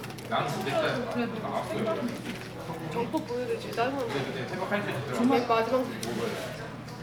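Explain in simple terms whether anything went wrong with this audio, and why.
Nothing went wrong here: no dropouts, glitches or distortion are audible anywhere in the clip.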